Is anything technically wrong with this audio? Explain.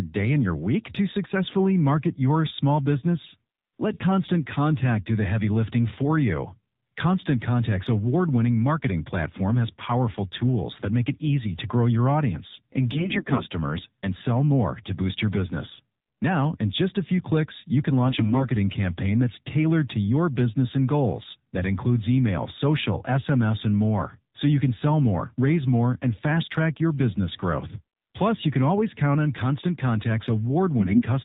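Yes. AMR narrowband mobile codec runs throughout this speech. It is squeezed to 8 kHz sampling and rebuilt from a pulse-driven vocal-tract model, so nothing above 4 kHz survives. The voice sounds plainly buzzy and synthetic, which fits a low mode around 7.4 kbps.

AMR bit errors hit at 12.92–13.46 s (after "to grow your audience", before "and sell more to"), 18.06–18.48 s (after "few clicks you can", before "campaign that's tailored to") and 30.80–31.04 s. Flipped low-priority bits misplace excitation pulses and skew gain and spectral values, so pitch and level hold but the voice turns hoarse, scratchy and gargly. It is roughest in the first burst and milder in the second.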